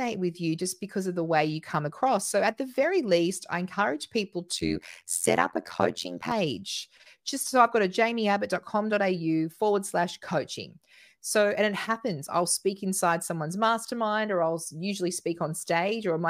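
Overlap-add ripple from 4.57 to 6.32 s, after "least I encourage people": mismatched frame overlap swings the level about 60 dB around 100 times a second, a metallic buzz.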